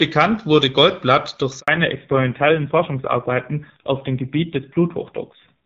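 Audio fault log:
1.60 to 1.68 s, handover gap: the speech cuts out for 80 ms while the call hops between networks and no speech frames arrive, so the sound fades within a few tens of milliseconds and leaves true silence until the new link picks up. Unlike a packet-loss dropout, there is no concealment smear or repeated fragment, and what follows carries on in a different-sounding channel rather than resuming as before.
1.68 s to the end, fallback to narrowband: from the moment the link returns, the call has left HD Voice, which before the gap was at 12.65 kbit/s with only light coding damage, for a narrowband codec, likely running near 5.9 kbit/s. Nothing above 4 kHz survives, so the voice turns duller, and the low rate adds a rough, buzzy texture. A simple low-pass filter would dull the sound without that added graininess or the abrupt switch at a handover.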